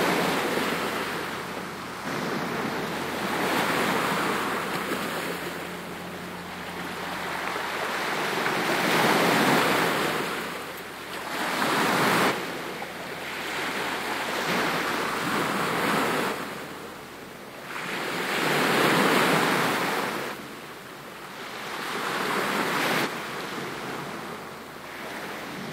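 Joins at 2.03, 9.58, 12.27, 14.44, 16.28, 20.29 and 23.02 s jump the sound forward by roughly 0.5, 0.3, 0.7, 0.7, 0.3, 0.5 and 0.7 s respectively. These are compressed frames skipped: whole frames, fitting a 42.7 ms frame length, never played.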